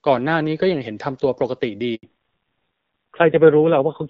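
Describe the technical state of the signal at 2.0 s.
At 2.0 s the sound drops out completely. Within a few tens of milliseconds it falls away and stays silent across the 80 ms from 1.95 to 2.03 s. This is a handover gap: the call was passed from one network link to another, and no speech frames reached the receiver during the switch. Whatever was spoken in that stretch is gone, not muffled, and the sound resumes only once the new link starts delivering audio.

From 2.03 s to the end, the speech is duller and rougher, with nothing above 4 kHz. This is a fallback to narrowband. Before the gap, the HD Voice path carried the upper band with only light coding damage. After the handover, the call continues on an older narrowband codec, which cuts off the brightness and crispness of consonants. The added raspiness suggests a low-rate narrowband mode, around 5.9 kbit/s.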